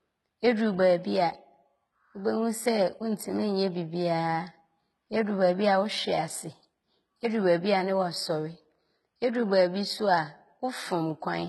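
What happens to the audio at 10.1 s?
At 10.1 s the speech carries heavy damage, likely from HE-AAC compression, throughout: nothing above 11.8 kHz, and copied, unaligned treble gives metallic, lispy s sounds rather than dull muffling.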